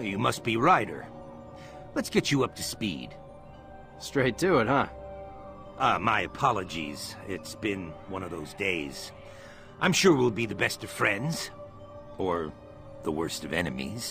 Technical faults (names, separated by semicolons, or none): none